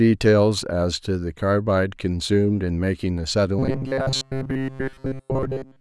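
From 3.59 s to the end at 5.81 s, the speech turns robotic, a rigid metallic buzz near 133 Hz. Most of the audio is replaced by repeats of a short buffer, likely from starved input.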